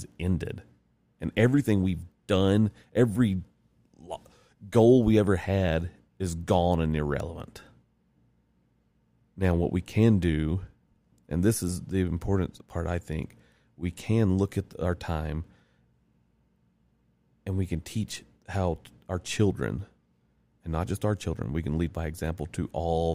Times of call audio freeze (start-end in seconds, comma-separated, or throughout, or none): none